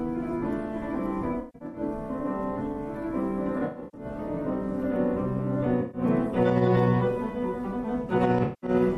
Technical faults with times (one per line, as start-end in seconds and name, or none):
1.39-1.81 AAC frame loss with concealment
3.59-4.05 AAC frame loss with concealment
5.81-6.01 AAC frame loss with concealment
8.43-8.70 AAC frame loss with concealment